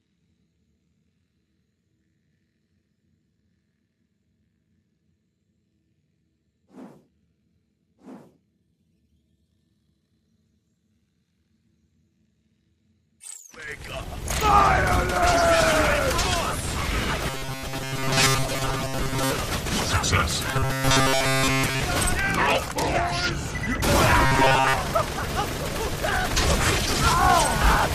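A rigid, metallic buzz at 133 Hz at 17.30–19.34 s, 20.51–21.80 s and 24.26–24.76 s is robotic sound from repeated short buffers, likely from a 7.5 ms slice looping while most of the incoming audio is skipped.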